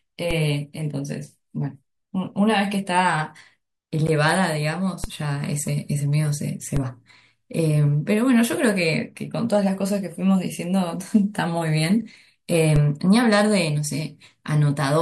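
At 0.31 s the zero line of the waveform jumps to a new level: a DC step, heard as a brief low thump under the speech, which continues unaffected. The offset does not hold. It drains away at the rate of a 20 Hz high-pass in the chain, so the thump is short and leaves no lasting shift. The same step recurs at 5.04 s, 6.77 s and 12.76 s, each time as a low thump.

At 4.07 s a gap at a join of encoded pieces interrupts the speech. A silence of about 12 ms opens and the sound resumes where it stopped. This fits two separately encoded segments joined without trimming. The encoder's start-up delay and the padding of the last frame both remain in the stream, leaving a short dropout. Its edges are softened by the codec rather than cut perfectly clean.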